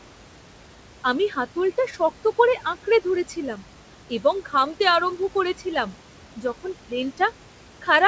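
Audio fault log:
Throughout, noise suppressor artifacts: the suppressor pulls the room noise down by about 17 dB in the gaps between words, then lets it swell back under the speech wherever it judges bands to be voice. That frame-by-frame gating makes the noise floor sink and rise with the words. The band-limit at 8 kHz comes from the call path, consistent with a G.722 wideband codec, not from the suppressor.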